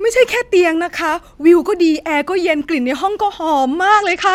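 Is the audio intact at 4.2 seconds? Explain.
No. From 3.90 s to the end, a Bluetooth SBC bit pool drop, consistent with roughly 10 instead of 31, about 77 kbps, starves the top sub-bands: treble dulls and gritty quantisation noise rises, unlike a clean low-pass.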